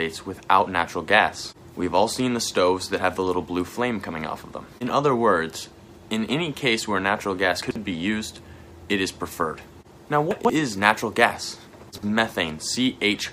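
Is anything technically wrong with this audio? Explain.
Yes. At 7.62–7.76 s, 10.31–10.50 s and 11.89–12.03 s the sound briefly jumbles. These are chunks out of order: a block of about 46 ms plays two, three, then two blocks late, leaving three hard joins each time.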